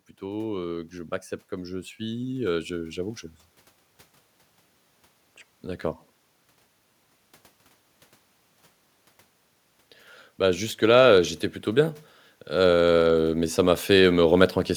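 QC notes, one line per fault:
0.19–3.27 s, automatic gain rising: the level climbs by about 6 dB over roughly three seconds as the gain control, judging the input too quiet, eases its gain upward, so speech and background swell together.
10.79–14.58 s, automatic gain rising: a second slow lift of about 7 dB across nearly four seconds, the same gradual gain increase raising voice and room noise in step.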